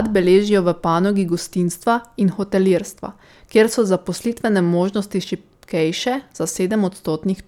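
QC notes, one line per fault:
No faults heard anywhere in this speech recording.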